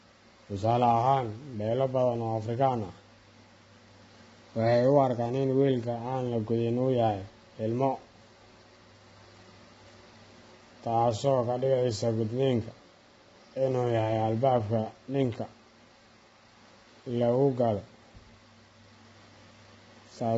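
From start to finish the speech sounds rough and grainy, with a hiss-like fill between the harmonics. Nothing survives above about 7.8 kHz, so the top end is dull and cut off. This points to heavy low-delay AAC compression, likely AAC-ELD at a low rate around 16 kbps, where very short frames resolve the harmonics poorly and too few bits remain to keep the gaps between them clean.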